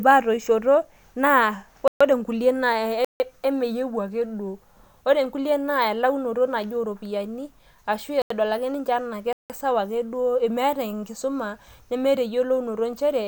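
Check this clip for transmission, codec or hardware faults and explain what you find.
The clip has one kind of fault: four blocks of digital silence, at 1.88–2.01 s, 3.05–3.20 s, 8.22–8.30 s and 9.33–9.50 s. The output buffer likely went unfilled in time, so the speech drops abruptly to silence for between 85 and 171 ms. The two later gaps fit 4096- and 8192-sample blocks. Each gap is heard as a short hole.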